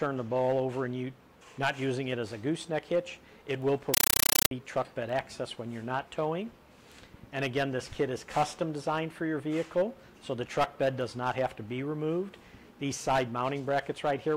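From 3.94 to 4.51 s, an undecoded AC-3 bitstream, which fits 384 kbps Dolby Digital, is treated as ordinary samples: a compressed stream played as audio. Its 8 ms data bursts and silent padding repeat 31.25 times a second, replacing the sound with very loud, chattering static.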